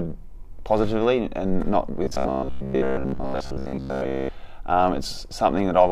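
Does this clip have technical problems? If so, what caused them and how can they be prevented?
Yes. From 2.04 to 4.30 s there's robotic sound from repeated short buffers: the audio turns into a rigid, metallic buzz pitched at about 66.7 Hz. The likely cause is audio arriving too slowly, so the playback side keeps looping the last 15 ms chunk and skips most of the real material, and that steady repeat rate is what you hear as the fixed buzz. To prevent it, give the stream a larger jitter buffer or fix whatever is starving it of data.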